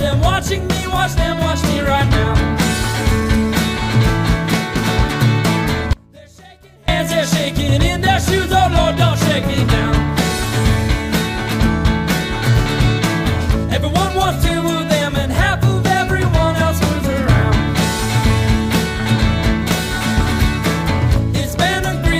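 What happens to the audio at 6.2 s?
The feed was likely lost while the path stayed live: an audio dropout to a faint residue from 5.93 to 6.88 s, cutting abruptly to faint sound about 25 dB down.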